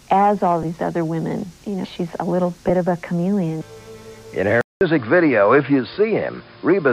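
At 0.63 s and again at 2.69 s a single Bluetooth LE Audio frame, 7.5 ms long, is lost. The LC3 decoder fills each gap by repeating the previous spectrum with randomised phase signs, so any tonal content briefly smears into a noisy blur instead of clicking. On a spectrogram each shows as a thin vertical stripe where harmonic lines dissolve into diffuse energy. The waveform shows a tiny patch of irregular, noise-like cycles.

At 4.61 s the sound drops out for about 200 ms and then returns duller and boxier, most likely because the input was switched to a poorer device such as a headset's call profile. Nothing reaches above 5.1 kHz afterwards, the level shifts by about 5 dB, and a new noise floor sits roughly 35 dB below the signal. A spectrogram shows a blank gap, then a hard ceiling at 5.1 kHz with a faint constant haze beneath it.

From 5.94 to 5.97 s four LE Audio frames, 30 ms in all, are lost on that narrower input. 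The concealment repeats the last spectrum with random signs, so the sound turns into a noisy smear. It appears as a short smeared block before normal decoding resumes.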